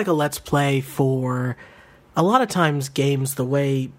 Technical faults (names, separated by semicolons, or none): none